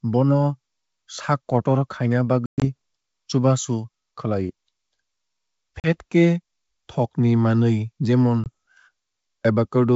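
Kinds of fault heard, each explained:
Packet loss on an ADPCM call: whole packets of this speech vanish into silence. The worst stretch loses 140 ms scattered over 160 ms (longest hole 120 ms, around seven packets), then about 40 ms goes, then a single short 20 ms hole after "thokni manwui jemon". A plain dropout would resume cleanly. Here the decoder's adaptive predictor and step size have drifted from the sender's, so speech returns with brief, slight distortion.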